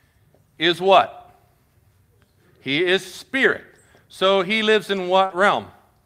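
At 4.23 to 4.29 s, packets went missing but the following packets carried low-bitrate copies, so this is a lost packet rebuilt from error correction. About 40 ms of speech, which fits two packets, plays back from those coarse copies, sounding rougher and noisier with no gap.

At 5.25 s about 40 ms of audio failed to arrive in time. This short concealed packet loss was covered by the receiver stretching the preceding sound before blending back, heard as a brief smear or wobble. Its final 20 ms, 5.30 to 5.32 s, was instead rebuilt from an error-correction copy, adding a moment of grainier texture as the audio rejoins.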